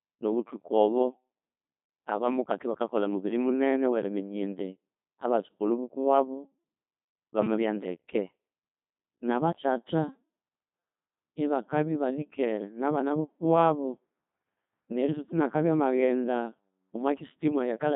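The speech in this clip has passed through a Codec 2 vocoder from start to finish, and the damage is heavy: the voice comes out robotic and buzzy. The decoder rebuilds the voice from sine waves using only pitch, voicing, energy and a spectral envelope, so the original waveform is gone. The degree of smearing fits the 2.4 kbit/s mode. Content is confined to roughly 150 Hz to 3.7 kHz, with nothing above 3.8 kHz.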